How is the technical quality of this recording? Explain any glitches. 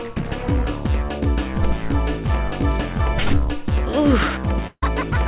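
The recording has one glitch. It comes through a narrowband call path with nothing above 4 kHz, which fits G.711 mu-law at 64 kbps.

Long network dropout, 4.67 to 4.83 s: audio likely stopped arriving, so the receiver stretched the last fragment into a fading buzz ending in about 50 ms of near silence, filling about 0.15 s in all. When the sound resumes, roughly 150 ms of it is simply gone.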